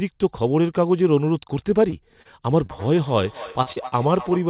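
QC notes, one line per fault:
1.90–1.94, 2.22–2.27, 2.66–2.70, 3.62–3.68, 3.72–3.78 and 3.88–3.94 s: short concealed packet loss. Chunks of 20 ms, and 40 ms in the last three, arrived too late, so the receiver extended the preceding sound and blended back in. Each gap is a brief smear or wobble, and at 2.22 s a few milliseconds simply drop out.
2.53–4.49 s: feedback echo between two devices. A second device in the room replays this microphone's signal, and the microphone picks it up again. Its own echo canceller cannot remove audio from another device, so the sound returns about every third of a second, thin and ringing, peaking about 16 dB below the direct speech.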